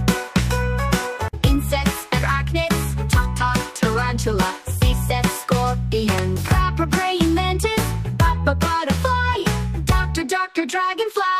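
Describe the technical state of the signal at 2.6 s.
The signal at 2.6 s is intact, with no audible fault at that moment.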